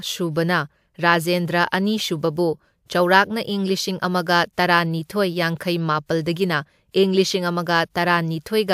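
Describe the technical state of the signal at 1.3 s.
At 1.3 s the signal is intact, with no dropout, distortion or other fault audible at that point.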